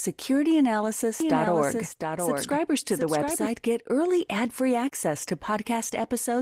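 From 1.20 s to 3.46 s the speech is doubled: a second full-band copy trails roughly 0.7 s behind, about 5 dB quieter, with no reverb tail, cutting in and out abruptly. That's a doubled audio track, likely a second capture path running late.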